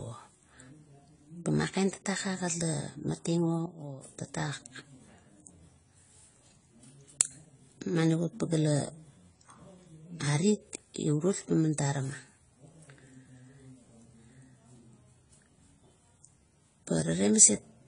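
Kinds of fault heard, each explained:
AAC compression: likely low-bitrate AAC-LC coding, around 24 kbps, removed everything above 10 kHz and quantised coarsely, leaving the speech dull with plainly audible codec damage.
sudden gain jump: likely a gain change applied without a ramp, dropping speech and background together by about 8 dB from 3.66 to 4.02 s.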